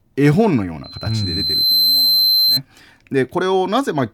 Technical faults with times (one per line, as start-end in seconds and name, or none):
0.83-2.60 loudspeaker feedback squeal